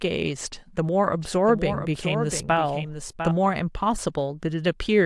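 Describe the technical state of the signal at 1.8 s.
At 1.8 s the speech is shadowed by a fainter copy of itself trailing around 0.7 s behind, roughly 10 dB down, full-band and dry, with no decay or room colour. This doubled audio track runs from 1.21 s to 3.31 s and cuts in and out abruptly at both ends. The likely cause is the same signal being captured a second time by a slower path, or an edit leaving two copies out of step and mixed together.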